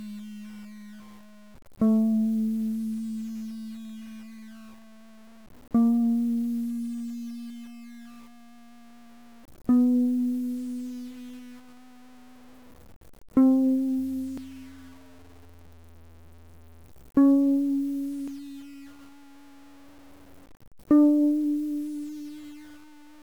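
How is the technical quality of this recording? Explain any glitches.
The quality is poor. The music is gritty throughout and jumps forward five times.

Low bit depth without dither runs through the whole clip. Grainy distortion tracks the music, about 30 dB below it, and gets rougher in quiet passages. This likely comes from truncating samples to around 7 bits with no dither.

Compressed frames are skipped at 1.0, 7.50, 12.70, 14.38 and 18.28 s. Each time the music leaps ahead, by roughly 0.1 to 0.3 s. The jumps fit whole lost frames of about 93 ms.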